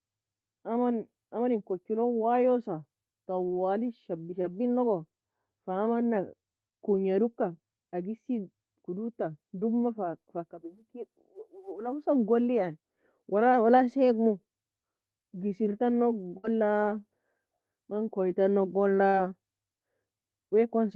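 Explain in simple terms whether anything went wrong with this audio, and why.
A few moments of this call never arrived in time, so the receiver had to guess. Three times, at 4.41 to 4.46 s, 9.60 to 9.63 s and 19.09 to 19.15 s, there is short concealed packet loss: a sliver of speech went missing and was patched by stretching the sound just before it, leaving a brief smear or wobble. At 16.37 to 16.45 s a burst of packet loss dropped about 60 ms in a row. The receiver held the last sound and faded it, so you hear a short buzz or hiss before the speech jumps ahead past the missing piece. All of this comes through the call's normal Opus path, which keeps sound up to about 12 kHz.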